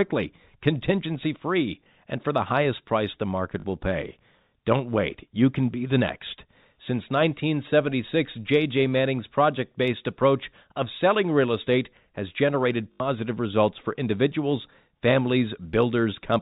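At 1.84 s, 3.6–3.64 s and 12.92–13.0 s there's packet loss with the last packet repeated: 20 ms chunks replayed, the longest buzzing at 50 Hz.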